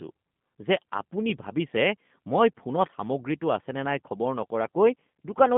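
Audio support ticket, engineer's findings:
Speech path passing through a G.729 codec for the whole clip: low-rate CELP coding, consistent with 8 kbit/s, rebuilding speech from filter, pitch predictor and sparse pulses. Band limited to about 150 Hz to 3.5 kHz, nothing above 3.5 kHz. Plainly rough, synthetic, buzzy timbre.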